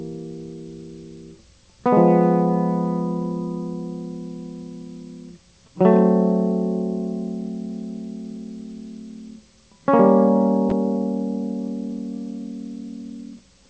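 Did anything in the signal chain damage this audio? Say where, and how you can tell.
No, nothing in the signal chain damaged this music. It has passed through a WebRTC call path, and the band stops at 8 kHz with nothing above, which fits a wideband call codec such as G.722 at 64 kbps.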